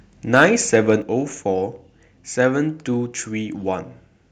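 Microphone overload at 0.35 to 0.45 s and again at 0.74 to 0.90 s: the loudest peaks are flattened, giving a harsh, crackling edge. The likely cause is an input level set too high, so the waveform tops run into the converter's ceiling and are sliced off. The first event is worse, with peaks about 4 dB over the limit and a noticeable share of samples clipped. The second is milder, about 1 dB over, with only a few samples affected.

Microphone volume stepped down at 1.02 s: shortly after the second distorted peak, the whole signal, both the voice and the background, drops by about 5 dB in a single abrupt step rather than a gradual fade. This likely comes from the call software reacting to the preceding clipping by cutting the device's input gain in one move, which leaves an audible level jump.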